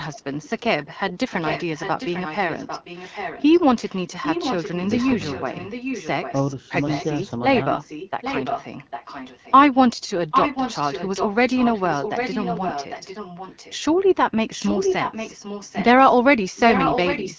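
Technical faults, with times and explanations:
0.14–0.5 s, 0.83–6.34 s, 6.82–7.06 s, 7.55–9.54 s, 10.31–13.77 s, 14.52–15.85 s and 16.56 s to the end, echo leak: a far-end echo canceller likely failed to remove loudspeaker pickup, so a copy of the speech returns about 0.8 s late, rising from faint to as loud as the speech.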